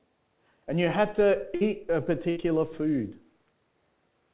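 Two bursts of packet loss hit the call: a run of consecutive packets went missing or arrived too late, at 1.55 to 1.64 s and again at 2.30 to 2.39 s. Each time the receiver stretched the last sound for about 56 and 65 ms, fading it into a brief held buzz or hiss, then resumed with roughly 60 ms of the sound skipped. The band-limited sound of the call codec, with nothing above 4 kHz, carries on either side of both gaps.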